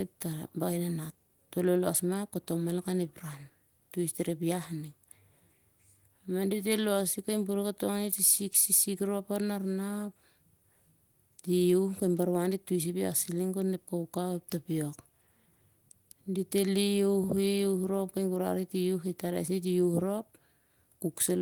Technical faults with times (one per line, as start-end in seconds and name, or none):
none